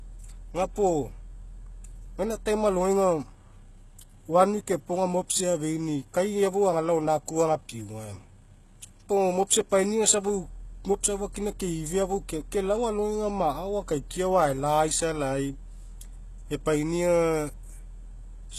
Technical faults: HE-AAC compression

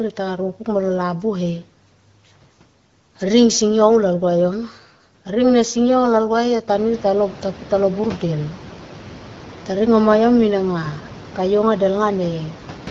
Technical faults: none

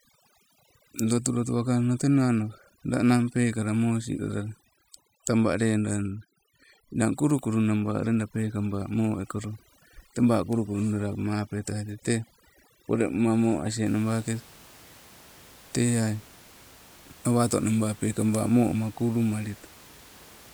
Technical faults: overdone noise removal

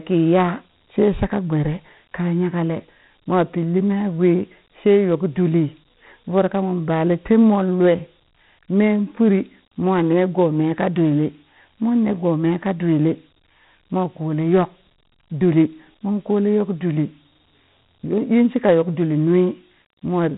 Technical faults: Dialogic VOX ADPCM

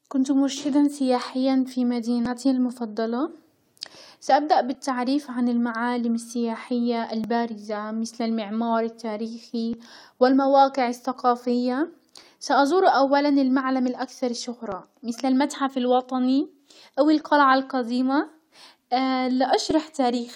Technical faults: audio missing between chunks

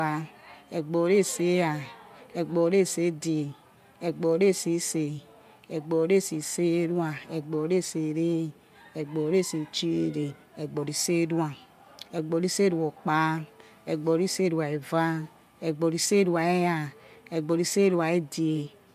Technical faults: none

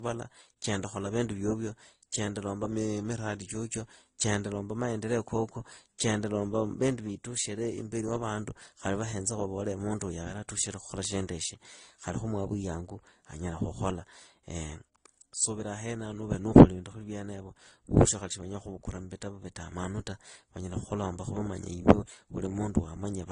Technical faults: transcoding between lossy codecs; drift correction step

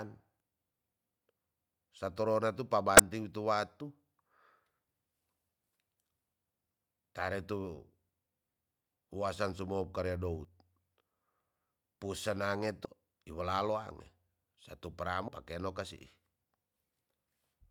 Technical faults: damaged data in a compressed stream

